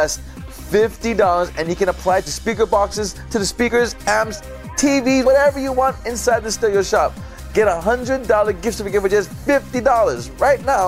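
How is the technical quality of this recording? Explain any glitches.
Two small dropouts where compressed frames were skipped, both brief.

The first runs from 3.67 to 3.69 s, and the second hits at 5.25 s. In each case whole chunks of the compressed stream never got played, either missing from the file or rejected by the decoder as damaged. The first jump loses roughly one frame, about 20 ms of audio, and the second roughly two, about 50 ms. That's consistent with frames around 23 ms long. The audio jumps ahead by the length of the missing frames.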